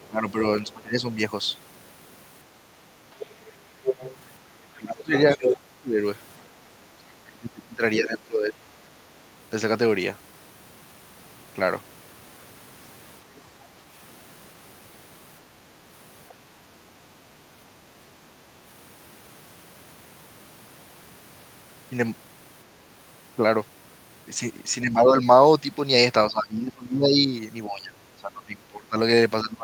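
Speech recording with echo-canceller trouble. The other side's voice leaking through appears in brief scraps at 0.02 to 0.07 s and 16.29 to 16.34 s, about 30 to 35 dB down. From 3.2 to 5.53 s it is strong, only about 5 dB below the talker. The likely cause is loudspeaker playback the canceller failed to remove. The talker's speech is suppressed in double talk from 0.08 to 1.06 s, dipping about 20 dB for roughly 0.7 s in total. It happens again from 4.73 to 9.05 s, dipping about 25 dB for some 3 s, and from 24.82 s to the end, about 20 dB. Both sides likely overlapped, so the canceller turned everything down. The background is gated by the echo canceller from 17.78 to 17.92 s. The room sound drops about 8 dB for some 150 ms while the canceller clamps the microphone, then returns.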